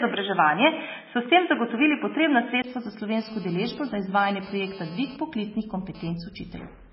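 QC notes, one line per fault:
Throughout, MP3 compression: the encoder was likely starved of bits, which fits a very low rate around 16 kbps, so it cut everything above 5.6 kHz and dropped weak frequency lines frame by frame. The speech sounds dull, watery and swirly, with smeared onsets.
3.18 to 6.11 s, GSM phone buzz: a nearby 2G phone's radio bursts, repeating at about 217 Hz during a data transfer, were rectified by the audio circuit. This adds a hard, raspy buzz rich in harmonics, about 17 dB below the speech, that cuts in and out.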